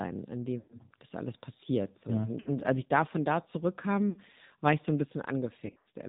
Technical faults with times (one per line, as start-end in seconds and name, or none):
0.00-6.08 AMR narrowband mobile codec
0.58-0.80 lost AMR speech frames
2.40-2.58 lost AMR speech frames
4.10-4.18 lost AMR speech frames
5.66-5.88 lost AMR speech frames